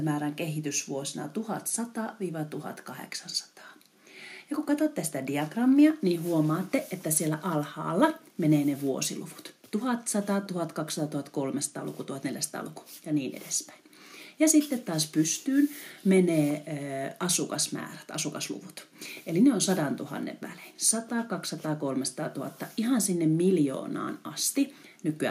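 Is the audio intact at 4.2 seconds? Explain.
Yes, at 4.2 seconds the audio is intact, with no dropout, click, distortion or other fault to be heard at that point.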